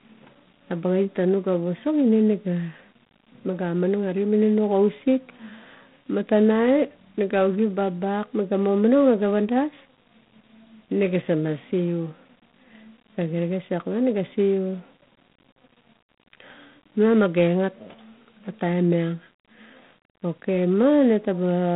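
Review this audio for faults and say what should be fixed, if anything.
G.726 ADPCM coding runs through the whole speech recording. A harsh, rasping hiss rises and falls with the speech level, which fits the 24 kbit/s rate, where each sample keeps only 3 bits of difference from an adaptive prediction. The band is limited to a telephone line, roughly 150 Hz to 3.6 kHz, with nothing above 3.8 kHz. On a spectrogram, energy stops sharply near 3.8 kHz, and grainy noise fills the gaps between harmonics wherever speech is loud. Capture directly or use 32 kbit/s or wider-band coding rather than 24 kbit/s G.726.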